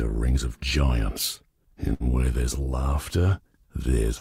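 From 1.93 to 2.03 s the sound freezes into a short, fading smear, then jumps ahead with about 60 ms missing. This is a burst of packet loss: consecutive packets were lost or late, so the receiver extended the last audio for 65 ms while lowering it.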